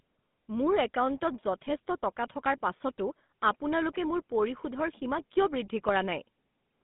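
From start to finish the speech carries the GSM full-rate codec. The band runs only from about 150 Hz to 3.6 kHz, and the voice has the plainly audible buzzy, gravelly grain of that coder, consistent with its 13 kbps rate. It rebuilds the voice from a vocal-tract filter excited by a sparse, regularly spaced pulse train, so fine detail in the excitation is thrown away and harmonics turn rough.

From 1.66 to 1.73 s, GSM bit errors break the voice into a brief squawk and gargle. The 68 ms span fits about three corrupted 20 ms codec frames. Flipped bits in the filter, pitch or gain parameters bend the spectrum and jolt the level. A second, shorter burst at 5.88 to 5.91 s, about one frame long, gives a single sharp pop-like distortion.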